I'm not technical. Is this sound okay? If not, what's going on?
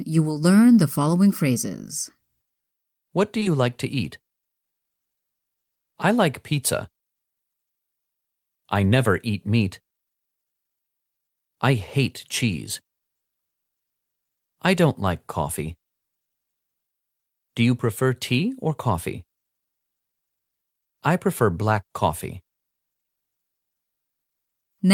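No. Just after 3.39 s, and again right after it at 3.43 s, there is short concealed packet loss in this speech. Two pieces of the call, each about 20 ms long, arrived too late. The receiver covered each gap by stretching the sound just before it, so the stretch near 3.4 s comes out as a quick smear or wobble. A plain dropout would leave a silent hole instead. A tiny sound there may be lost.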